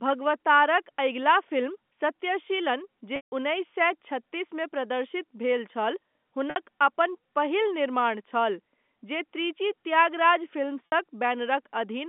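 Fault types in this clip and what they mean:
packet loss with pitch repetition: at 3.16, 6.50 and 10.86 s, the last pitch period repeats to fill missing audio; the 60 ms gaps sound held and buzzy, and the 160 ms gap fades out.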